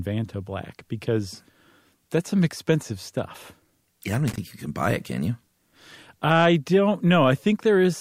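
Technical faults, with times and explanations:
4.28–4.38 s, loose connector crackle: A worn or dirty contact somewhere in the signal path shifted and began making and breaking contact in quick, uneven succession. For about 100 ms after "I don't", the speech is repeatedly chopped on and off. Together this gives an irregular, scratchy burst of crackle that clears just before "you can buy it".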